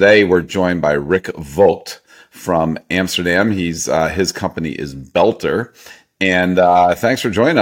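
No technical faults can be heard anywhere in the recording; the signal stays steady and intact throughout.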